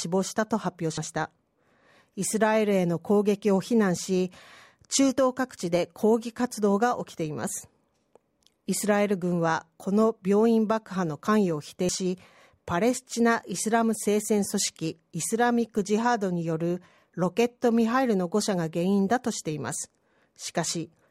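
At 0.98 s and again at 11.89 s the speech jumps abruptly, likely a dropped buffer (overrun): audio was overwritten before being read, losing roughly a tenth of a second, then about half that, with no gap. Waveform shows a hard splice; spectrograms show a vertical broadband line.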